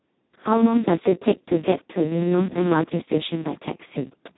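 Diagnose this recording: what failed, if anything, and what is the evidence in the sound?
The Speex codec failed at the codec stage: throughout, the speech is hoarse and robotic and nothing remains above 3.9 kHz, consistent with starved CELP excitation at roughly 2 kbps.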